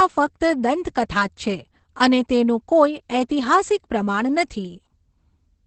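From start to finish the speech sounds muffled, hoarse and faintly robotic, with nothing above about 8.6 kHz, so the top of the sibilance is gone. This is Opus voice compression running in its SILK linear-prediction mode with the band held to wideband. The heavy damage points to a bitrate of about 10 kbps, low enough that the excitation is coded coarsely in each 20 ms frame, roughening the voice texture.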